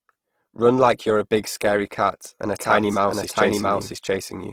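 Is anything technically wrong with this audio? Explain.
Yes, two faults. Throughout, the speech sounds grainy and rough, plainly damaged by what is likely Opus compression. The music-style mode fills starved bands with folded or noise content, which fits a low rate near 16 kbps. The grain, rather than MP3-style swirling holes, sets it apart.

From 2.59 s, just after "scary cat and a", to the end, there is a doubled audio track. A second full-band copy, about as loud, runs roughly 0.7 s behind and starts abruptly, with no decay or room colour, so it is not an echo.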